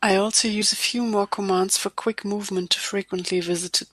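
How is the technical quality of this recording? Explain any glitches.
The recording has one glitch, a short burst of damaged data in a compressed stream at about 0.61 s, between "I also" and "a few more commands". Corrupted bytes made the decoder misread that stretch and lose frame sync, so it had to hunt for the next valid frame header. That leaves a brief blip, under 20 ms long, cutting into the speech.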